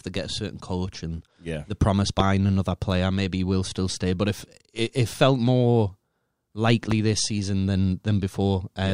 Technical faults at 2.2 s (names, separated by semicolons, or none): loud pop